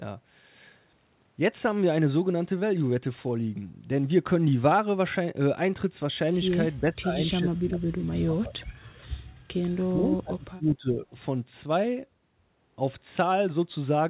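An echo canceller likely mistook overlapping talk for loudspeaker echo, causing speech suppressed in double talk from 6.8 to 7.16 s, 7.41 to 8.59 s and 9.9 to 11.04 s. Level sinks by roughly 25 to 30 dB, choppy, over narrowband audio capped at 4 kHz.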